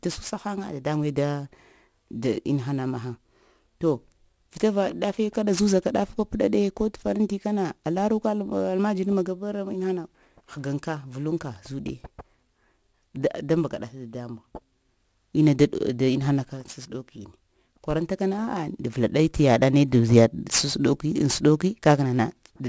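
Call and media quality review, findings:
Aliasing, throughout: sibilants gritty and metallic, spectrum packed hard up to 8 kHz. Points to downsampling near 44.1 kHz to 16 kHz with no anti-alias filter. Folded content sits roughly 20 dB down, steady, unlike warbling codec artefacts.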